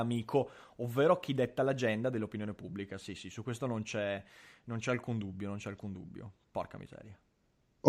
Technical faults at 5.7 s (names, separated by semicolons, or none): none